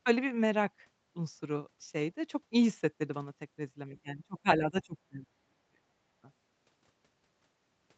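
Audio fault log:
3.88–5.84 s, speech suppressed in double talk: the talker's level sinks in broken stretches totalling around one and a half seconds, at worst by roughly 30 dB. This is likely an echo canceller mistaking the talker's overlapping speech for loudspeaker echo. The waveform shows pinched, notched segments; the spectrogram shows faded, patchy bands.
6.12–6.17 s, background gated by the echo canceller: for about 50 ms the room sound drops by about 22 dB while loudspeaker audio plays, then returns. The waveform shows a brief flat-bottomed dip, and the spectrogram a thin vertical gap across the band, which ends at 8 kHz.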